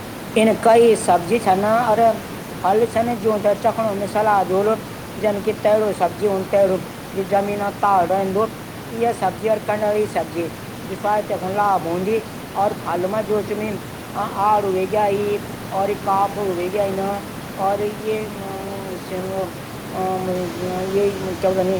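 No technical faults are present.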